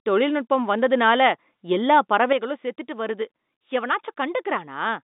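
A gain change applied instantly, likely a level setting switched without a ramp, causes a sudden gain jump at 2.33 s, right after "தொழில்நுட்பம் வந்ததுனால எல்லா". From there to the end, speech and its telephone-band background drop together by about 6 dB.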